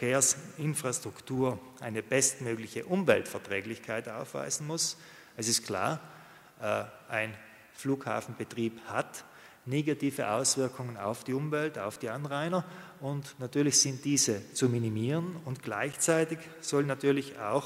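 Two blocks of digital silence interrupt the audio, at 11.96 s (about 5.8 ms, which fits a dropped 256-sample buffer) and 15.93 s (about 9.2 ms). The signal drops straight to silence and returns without a fade, so each gap is heard as a short tick.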